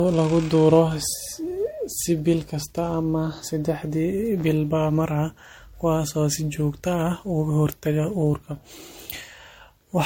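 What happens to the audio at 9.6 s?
Generation loss runs throughout, including 9.6 s. Repeated lossy re-encoding, likely around four MP3 passes, stacks quantisation noise into a swirly, hollow smear with blurred attacks. On a spectrogram it appears as patchy spectral holes and nothing above 16.6 kHz.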